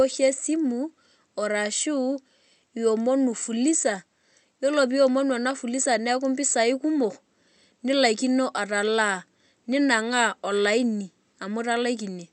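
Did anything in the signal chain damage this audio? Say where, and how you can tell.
No, nothing in the signal chain damaged this speech. It passed through a WebRTC call path whose Opus coding rolls the top end off at about 8 kHz, as that kind of call link normally does.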